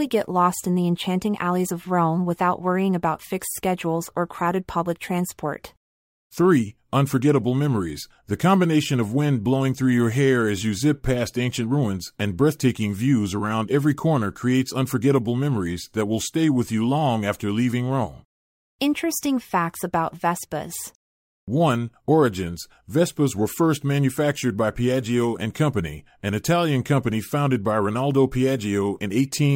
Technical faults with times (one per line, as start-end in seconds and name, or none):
none